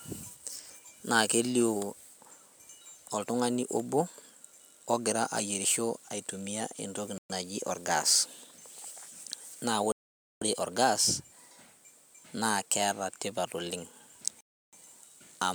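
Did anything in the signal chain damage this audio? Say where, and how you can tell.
Yes. The speech cuts to dead silence three times, for 0.12 s at 7.18 s, 0.5 s at 9.92 s and 0.32 s at 14.41 s, then carries on. That points to the wireless playback link, likely Bluetooth stalls: delayed packets let the headphone buffer run empty.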